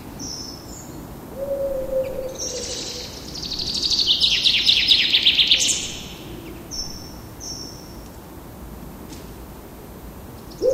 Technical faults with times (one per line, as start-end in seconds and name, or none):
0.00-10.74 switching supply whistle